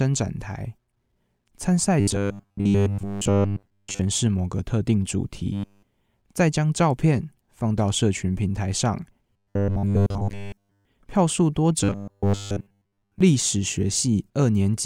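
Audio likely arrived too seldom, so a roughly 10 ms buffer was looped in its place. The result is robotic sound from repeated short buffers, a rigid metallic buzz at 100 Hz, at 2.00–4.01 s, 5.53–5.83 s and 9.33–10.85 s, and more partially at 11.84–13.21 s.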